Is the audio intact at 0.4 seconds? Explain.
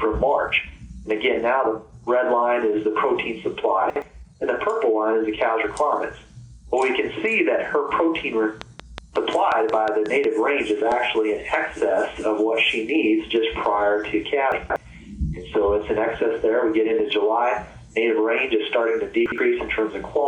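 Yes, the audio is intact at 0.4 seconds, with no fault at that moment.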